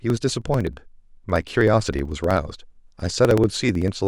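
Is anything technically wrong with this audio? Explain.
Yes. Periodic USB or driver dropouts run from 0.10 to 4.01 s: every 63 ms a blocked bus or driver skips roughly a millisecond of speech, producing steady ticks.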